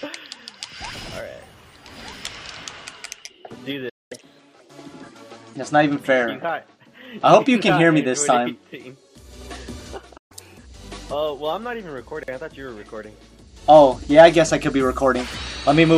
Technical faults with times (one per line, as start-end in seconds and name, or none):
3.89-4.12 playback stall
4.12-5.56 catch-up at higher speed
10.17-10.32 playback stall
10.32-10.58 catch-up at higher speed